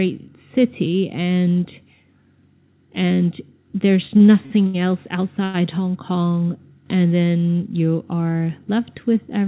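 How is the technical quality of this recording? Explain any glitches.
The recording has two timing glitches from late-arriving packets. The sound is also band-limited, with nothing above 4 kHz, which fits a G.711 mu-law call path at 64 kbps.

Repeated stalls (stutter), 4.08 to 4.76 s: packets kept turning up late, so the jitter buffer drained four times in quick succession. Each time the receiver extended the last sound and then resumed, filling 157 ms in total, with the longest gap 74 ms. About a quarter of that stretch is concealment. Nothing is lost, but the audio drags and stumbles unevenly.

Short stall from a late packet, 5.44 to 5.56 s: a single packet arrived about 100 ms behind schedule, leaving the jitter buffer empty. The receiver held the current sound for 100 ms until the packet came in, then carried on from where it had stopped. No audio is missing. What you hear is one sound sustained unnaturally long, with a faint buzzy or dipping quality.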